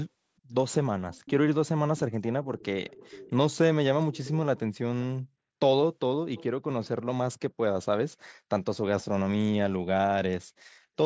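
A faint, delayed copy of the speech surfaces at 1.12–1.3 s, 2.44–2.65 s, 2.89–3.36 s, 4.13–4.3 s and 6.35–6.44 s, trailing by about 440 ms at roughly 20–25 dB down. This is echo leak, likely a loudspeaker on one side of the call whose echo canceller let residue through.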